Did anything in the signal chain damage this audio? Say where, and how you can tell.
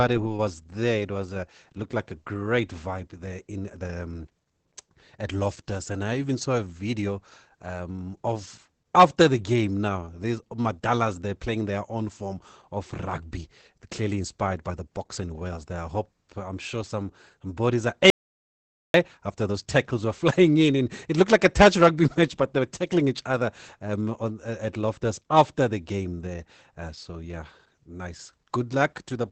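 Yes. Throughout the speech there is codec damage: it sounds muffled and hoarse, with a faint robotic edge, and nothing reaches above about 8.5 kHz. That is Opus voice compression in its SILK mode, coding wideband speech with a linear-prediction model and a coarsely quantised excitation signal. The degree of smearing fits a low bitrate of around 12 kbps with 20 ms frames. The top band is dropped entirely, and the crude excitation gives the voice its rough, buzzy texture.

Just after "some some bodies are", the sound cuts off at 18.10 s and returns at 18.94 s. That is an audio dropout to silence lasting 0.84 s. The gap is silent, with no room tone or noise floor, so the level didn't just fall. The signal stopped arriving while the recorder kept writing samples. The likely cause is a loss of input upstream, such as a momentary device disconnect, a failed link or a brief mute, rather than anything in the codec.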